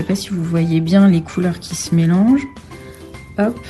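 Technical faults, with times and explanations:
No technical faults can be heard in this clip.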